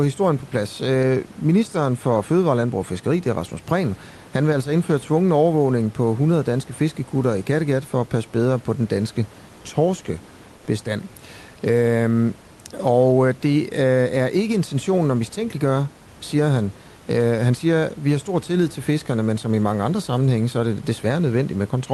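A speech recording carried over a call path whose coding leaves little above about 12 kHz, with room noise sitting about 27 dB below the speech. From 10.57 to 10.67 s, a gap of about 100 ms, the background changes character: the real room noise gives way to a smoother, more uniform hiss at about 1 dB lower level, then the original background returns. This is comfort noise in place of the background, likely from the codec's discontinuous transmission, where the sender stopped sending audio during a pause and the receiver filled it with synthetic noise shaped to approximate the room.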